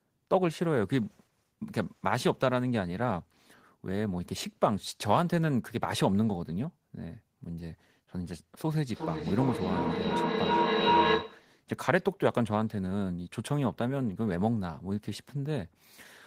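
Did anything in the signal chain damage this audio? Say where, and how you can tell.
Yes. From 8.87 to 11.56 s a pulsing tone near 1 kHz swells to about 3 dB above the speech, throbbing roughly every 0.4 s. This is feedback howl at the call stage: two devices in one room re-amplify each other until the loop breaks.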